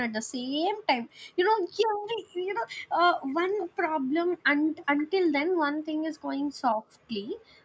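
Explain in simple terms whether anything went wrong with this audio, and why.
Two things go wrong in this speech clip.

The first is an echo leak. A faint, delayed copy of the speech comes back about 0.47 seconds after the original. It is heard from 3.28 to 3.67 s, 4.11 to 4.37 s, 4.76 to 5.05 s, and very briefly at 7.28 to 7.32 s. The likely cause is a loudspeaker on the far end. Its microphone picked up the sound, and the echo canceller failed to remove all of it.

The second is background gated by the echo canceller. While that canceller was busy, it turned the microphone down very hard. The room sound drops out almost completely from 3.67 to 4.11 s, again from 4.63 to 4.75 s, and from 7.38 s to the end. The first two times, the background comes back when the canceller relaxes.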